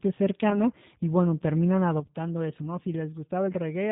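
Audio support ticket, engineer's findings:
G.729 codec damage, whole clip. Speech band-limited, nothing above 4 kHz, with a rough, slightly synthetic edge on voiced sounds. Character fits G.729A at 8 kbit/s: the decoder rebuilds each 10 ms frame from a vocal tract filter, a pitch predictor and a few pulse positions, so fine detail and high-frequency content are discarded. Damage plainly audible. Component: narrowband VoIP codec in the call path.

VoIP packet loss concealed by the speech codec, 0.50 to 0.65 s. Brief smear where the decoder patched a gap of about 10 ms, which points to a single lost frame. It repeated the last pitch and filter at reduced gain. Because each frame is predicted from the previous one, the weakened, distorted sound persists to about 0.65 s. Component: network jitter or loss upstream of the decoder.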